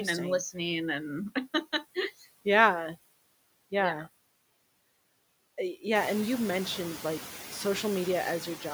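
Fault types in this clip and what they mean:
noise suppressor artifacts: The background noise drops away between words and swells back up under the speech throughout, clearest after the room noise rises about 12 dB near 6 s. A suppressor is cutting bands it judges to be steady noise, frame by frame, by about 20 dB.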